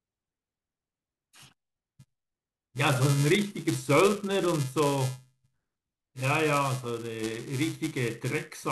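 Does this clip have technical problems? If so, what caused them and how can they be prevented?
Yes. Buffer tearing throughout: read and write pointers cross every period, splicing in a sliver of audio about 10 ms old, causing a 375 Hz buzz that suggests 128-sample buffers. Prevent it by keeping the writer a safe margin ahead of the hardware read position, with larger buffers or proper period synchronisation.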